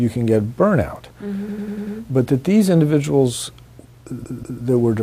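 Repeated frames at 1.49 to 1.97 s: a 96 ms block of compressed audio plays five extra times, a stutter adding 480 ms. At 4.24 to 4.62 s, a 192 ms block repeats twice more, adding 384 ms.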